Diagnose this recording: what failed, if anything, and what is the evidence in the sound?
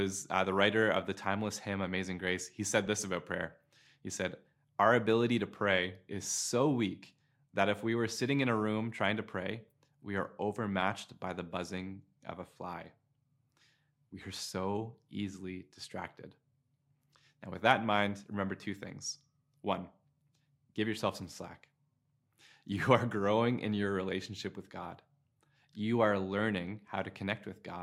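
The failure is at the network or transport stage: frames out of order at 2.86 s in this speech recording. The evidence is a brief garbled flutter. The mechanism is two adjacent runs of frames arriving swapped and being decoded as received, which fits two-frame runs of 16 ms frames. The segment's halves play in reverse sequence, and no time is lost.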